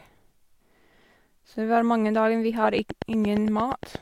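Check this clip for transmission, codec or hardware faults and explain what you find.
One fault is present. From 2.79 to 3.96 s, a train of clicks: likely interference injecting regular pulses at 8.6 per second, heard as about ten identical ticks peaking about 10 dB above the speech.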